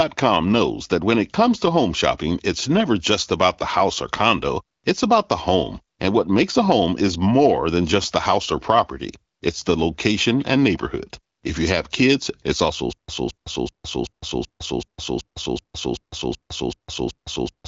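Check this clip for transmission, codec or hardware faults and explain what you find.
One fault is present: a stutter with silent gaps from 12.93 s to the end. The likely cause is a stalled player or stream that kept retrying, replaying the last buffered fragment each time and then running dry. The same 223 ms burst of speech returns 12 times at an even 380 ms period, with about 157 ms of digital silence after each repeat. The speech that should have filled that stretch is lost, and the clip ends still looping.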